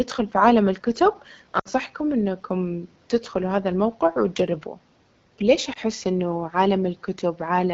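Throughout the clip the speech has a rough, raspy grain, and the top end past about 6.4 kHz sounds like a thin wash of hiss rather than real detail. This is the AMR wideband (HD Voice) codec running at one of its lowest rates, which fits the 8.85 kbit/s mode. With so few bits to model each pulse and the vocal tract shape, the coder rebuilds the voice coarsely and fills the highest band with shaped noise. The room noise, about 38 dB below the speech, sits underneath it all.

From 1.59 to 1.68 s the voice drops to near silence within two frames before returning briefly weak or rough. This comes from lost AMR speech frames, a run of three, about 60 ms, that failed their checks. The decoder repeated the last good pitch and tract settings at falling gain. From 5.73 to 5.79 s a single lost frame of 20 ms leaves only a short dip or warble.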